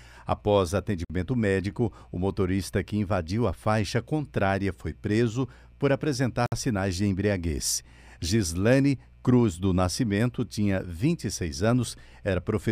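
At 1.05 s the speech drops to about 51 ms of dead silence, then resumes on "médico o motorista que". At 6.46 s, after "foi preso por apresentar", a second gap of about 59 ms cuts in before "sinais de embriaguez". Both are likely a Bluetooth stall: radio interference delayed packets, the headphones' buffer emptied, and playback halted until the retransmitted audio arrived.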